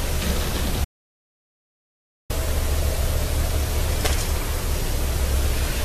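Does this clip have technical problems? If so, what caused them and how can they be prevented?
Yes. An audio dropout to silence runs from 0.85 to 2.30 s, about 1.45 s of silence. Input was likely lost while recording continued. Secure connections and monitor levels.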